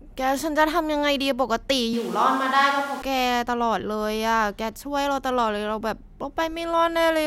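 From 1.94 to 3.02 s the speech switches to a distant microphone, likely because the close microphone's signal dropped out. It turns roomy and thin at once, with little level change and room noise roughly 25 dB below the speech. A spectrogram shows weaker low frequencies and a raised noise floor between the hard edges.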